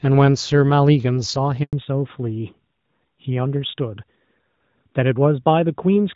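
At 1.63 s a handover gap cuts the speech: the call is switched between networks, no frames arrive for 100 ms, and the sound fades quickly to silence until 1.73 s. Unlike a packet-loss dropout, nothing is concealed or smeared over the hole. It is clean silence, and the link that resumes is a different one.

From 1.73 s to the end comes a fallback to narrowband. The wideband HD Voice sound before the break, which fits AMR-WB at 12.65 kbit/s, gives way to a narrowband codec, likely AMR-NB at 12.2 kbit/s. Nothing above 4 kHz survives, so the voice turns duller and rougher. What separates this from a gradual bitrate drop is that the band shrinks abruptly, right at the gap, and never returns.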